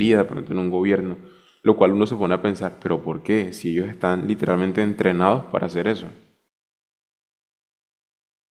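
No technical faults are audible anywhere in the speech recording.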